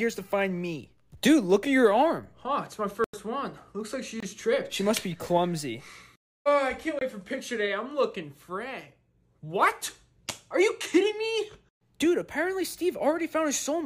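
The output buffer likely went unfilled three times, leaving blocks of digital silence: about 93 ms at 3.04–3.14 s, then 23 ms each at 4.20–4.23 s and 6.99–7.01 s, lengths that fit 4096- and 1024-sample buffers. The sound cuts out and back with no fade, giving a short hole first, then two briefer ones.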